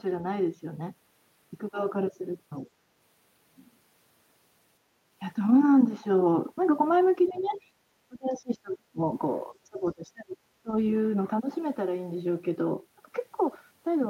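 An echo canceller in this speech recording likely failed to remove all of the loudspeaker signal, so the other side's voice leaks through faintly, roughly 30 dB down, from 7.29 to 7.58 s. During the same double talk it likely suppressed the talker too: speech suppressed in double talk appears as dips and dropouts at 7.29–7.61, 8.08–9.02, 9.61–10.39 and 10.63–10.69 s, some as deep as around 30 dB.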